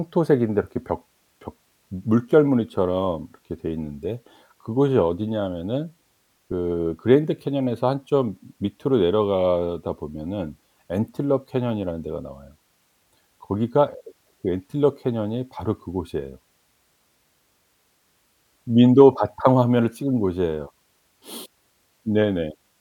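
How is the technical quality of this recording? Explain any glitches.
The recording's signal path shows no technical glitches anywhere in the speech.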